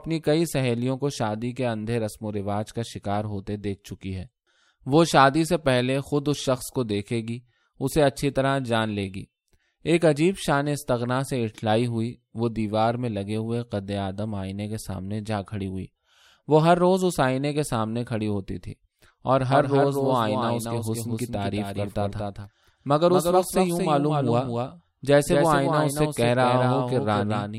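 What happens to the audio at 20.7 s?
At 20.7 s the speech is inside a doubled audio track that begins abruptly at 19.51 s and runs to the end. A full-band copy trails the original by roughly 200 ms, a few dB quieter, with no reverb tail, likely from a second, slower capture path. It sounds like a hard, flat echo. On a spectrogram every syllable's pattern repeats, shifted right by that fixed gap. The waveform shows each burst followed by a smaller duplicate, about 5 dB down.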